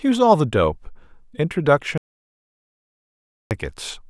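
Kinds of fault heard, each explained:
Audio dropout to silence: The speech cuts off abruptly at 1.98 s and returns mid-flow at 3.51 s. The gap in between is silent, with no room tone at all. About 1.53 s of speech is lost, likely because the input signal was interrupted while recording continued.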